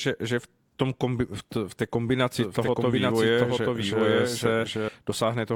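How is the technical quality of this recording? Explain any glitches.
The recording has one clear fault, a doubled audio track. From 2.37 s to 4.89 s, just after "tom kombi v té", the speech is repeated about 0.7 s late at roughly equal level. The likely cause is a second, slower capture path mixed in. The delayed copy is dry and full-band, and it starts and stops abruptly.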